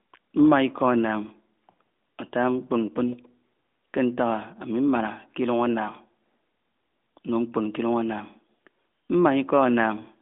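No technical faults can be heard in this speech clip.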